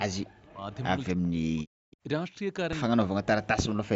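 From 0.03 to 0.67 s, speech is suppressed in double talk, likely because the echo canceller, faced with both sides talking, turned everything down. The voice dips by up to about 40 dB.

From 0.72 to 0.81 s comes an echo leak, likely from a loudspeaker echo the canceller failed to remove. A faint copy of the voice returns about 0.27 s late, roughly 25 dB below the speech.

From 1.14 to 1.71 s the same double-talk suppression returns, with the voice again pulled down by as much as about 40 dB.

From 1.91 to 1.97 s a second echo leak brings back a brief scrap of voice about 0.27 s late, around 30 dB under the speech.

From 3.05 s to the end, double-talk suppression cuts the voice by up to about 40 dB. The whole clip stays within an 8 kHz band from the Opus call path.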